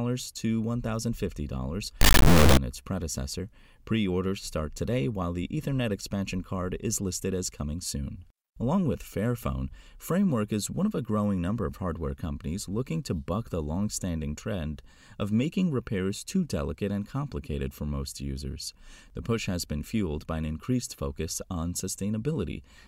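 From 2.01 to 2.57 s, just before "its predecessor", integer read as float: 32-bit integer samples decoded as floats produce a harsh, extremely loud square-wave buzz, flat-topped rails on the waveform and broadband spectrogram energy.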